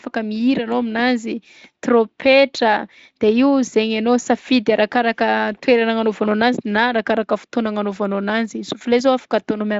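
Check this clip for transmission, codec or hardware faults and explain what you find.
Nothing here sounds like a fault: the speech comes through a Speex path whose top end stops at about 7.6 kHz, and any codec roughness is faint at most, which fits a fairly generous wideband setting.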